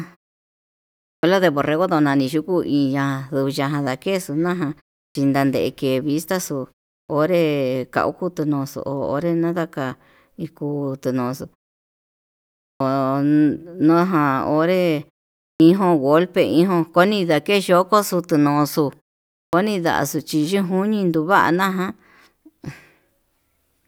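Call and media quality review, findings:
Clipped start after a pause: output path sleeps in silence and is slow to wake, dropping about 40 ms of onset at 1.19 s (before "de borrego"), 5.11, 7.05, 12.76, 15.56 and 19.49 s (before "ndaxo chí yenjuini tuvana"). Speech jumps in abruptly without its first sounds.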